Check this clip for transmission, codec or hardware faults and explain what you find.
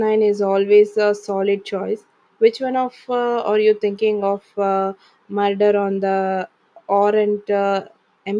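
Nothing in the speech recording points to a transmission, codec or hardware fault. No problem turns up anywhere in the audio.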